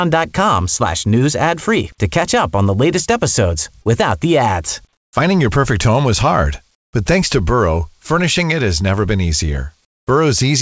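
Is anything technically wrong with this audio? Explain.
Yes, there are two kinds of fault.

Short concealed packet loss occurs at 3.82 to 3.87 s. About 40 ms of the call arrived too late for the decoder, so the receiver extended the preceding sound to cover roughly 31 ms and then blended back into the real signal. It is heard as a brief smear or wobble.

Comfort noise in place of the background occurs at 4.93 to 5.13 s, 6.75 to 6.93 s and 9.85 to 10.07 s. In these pauses the background, already faint at about 48 to 54 dB below the loudest parts, becomes a smoother noise about 10, 19 and 20 dB quieter. This is likely discontinuous transmission, with the receiver generating synthetic noise during silence.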